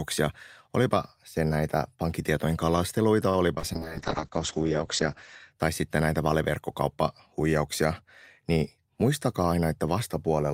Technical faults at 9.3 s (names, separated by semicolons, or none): jitter buffer speed-up